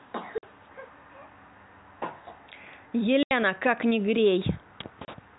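At 0.38, 3.23 and 5.05 s, packet loss filled with silence cuts 50, 80 and 30 ms holes in the speech, consistent with 10 ms packets. Each hole shows as a flat-line gap on the waveform and a blank vertical band on the spectrogram, with hard edges, under narrowband G.711 telephone coding.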